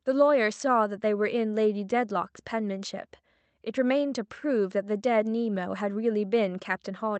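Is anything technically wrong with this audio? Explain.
No, nothing here has gone wrong; the speech just carries the usual coloring of an Opus call path, with the top end stopping at about 8 kHz, which is normal for that kind of link.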